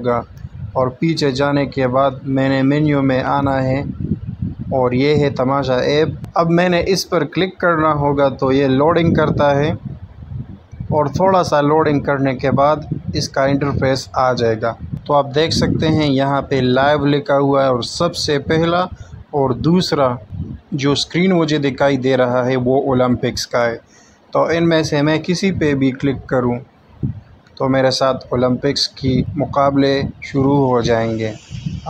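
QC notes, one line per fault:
No faults detected in clip.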